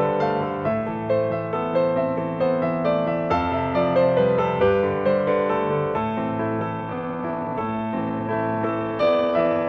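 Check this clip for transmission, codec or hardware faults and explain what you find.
One fault stands out: a time-stretched section over the final stretch of the clip. From 6.69 s to the end at 9.68 s, the pace suddenly drops to about 0.62 times normal speed while the pitch stays put, and the sound drags. The likely cause is processing software lengthening this portion to fill a target duration, keeping the pitch by repeating short slices of audio.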